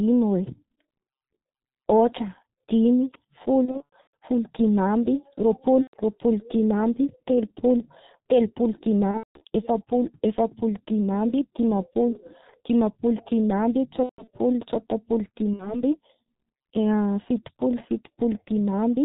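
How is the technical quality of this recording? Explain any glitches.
The technical quality is poor: heavy low-bitrate codec damage runs through the whole recording, and the speech breaks up five times.

G.723.1 codec coding is present throughout, heavy, fitting its 6.3 kbit/s mode. Long 30 ms frames and a slowly updated vocal model leave speech muffled, hoarse and smeared at consonants. A spectrogram shows nothing above 4 kHz and blurred, blocky formant detail.

VoIP packet loss concealed by the speech codec occurs at 3.65–4.14 s (right after "ôhatra dimy", the longest, about 300 ms lost with runs up to 120 ms), 5.82–5.96 s, 9.11–9.43 s, 14.03–14.29 s and 15.53–15.83 s. The decoder repeats its last pitch and filter at falling gain, giving buzzy tones or coloured noise that fade: flat harmonic stripes or smeared noise and a decaying waveform envelope.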